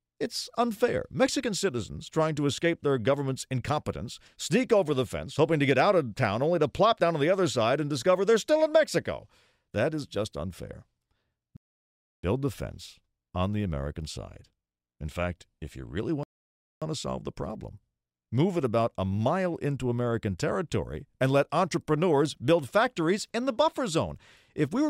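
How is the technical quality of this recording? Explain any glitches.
The recording has two playback interruptions of the same kind.

Rebuffering stalls occur at 11.57 to 12.24 s and again at 16.23 to 16.82 s. Each time, the player used up its downloaded audio and halted until more data arrived. The speech drops abruptly into silence, adding about 0.67 s the first time and 0.58 s the second, then picks up exactly where it stopped. No speech is lost, but the gaps break the flow.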